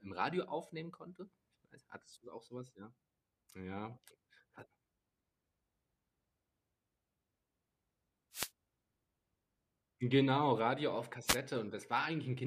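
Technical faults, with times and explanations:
8.32–8.50 s and 11.26–11.37 s, wireless microphone noise hits: two short swishes of static break over the speech, the first lasting about 0.19 s and the second about 0.12 s. What's going on is the analogue FM radio link fading for a moment as reflected copies of the signal cancel each other at the receiver. With too little carrier getting through, the receiver's own noise briefly rises.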